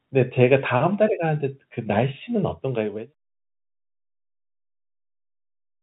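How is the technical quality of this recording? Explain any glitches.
No glitches, and no technical faults in the recording.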